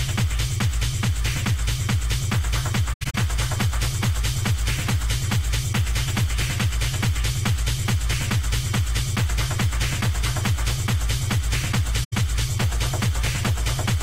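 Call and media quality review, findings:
AAC frame loss with muting, 2.93 to 3.15 s and 12.04 to 12.13 s: the decoder zeroed the missing frames, so the sound fades into soft gaps, the longest about a tenth of a second.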